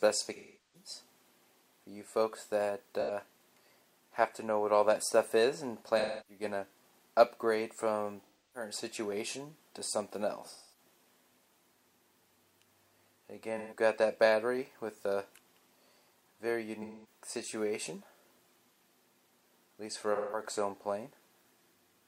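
AAC frame loss with concealment recurs eight times: 0.36–0.89 s (about 384 ms, the longest), 3.00–3.11 s, 5.98–6.43 s, 8.25–8.70 s, 10.48–10.78 s, 13.58–13.78 s, 16.82–17.06 s and 20.15–20.43 s. In each, compressed frames went missing and the decoder rebuilt the gap from the last good spectrum, so the sound turns smeared, noisy or phasey rather than dropping to hard silence or clicking, which separates it from a plain dropout.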